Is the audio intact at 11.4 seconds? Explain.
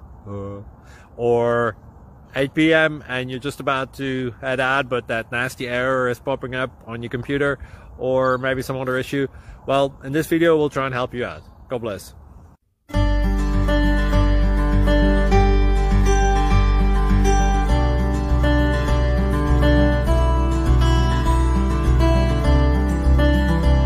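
Yes, at 11.4 seconds the audio plays through intact, with no dropout, click, distortion or other fault at that point.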